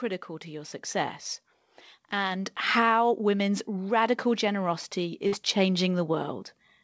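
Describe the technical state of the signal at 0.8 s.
At 0.8 s the signal is intact, with no dropout, click or distortion, just the speech passing through the call path with its band-limited sound and nothing above about 8 kHz, as a G.722 link at 64 kbps would give.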